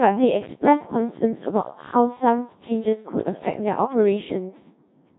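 Codec 2 vocoder, throughout the clip: the speech has been rebuilt from pitch, voicing, energy and a coarse spectral envelope rather than the original waveform, so it sounds robotic and buzzy, heavily degraded in a way that fits a rate near 1.3 kbit/s.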